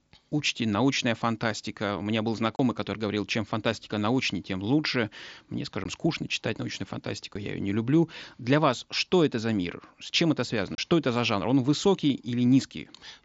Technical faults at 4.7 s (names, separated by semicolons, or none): none